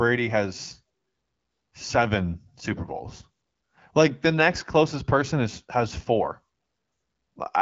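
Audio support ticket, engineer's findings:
Nothing stood out on listening to the speech, which comes through the AMR wideband (HD Voice) path at 12.65 kbit/s.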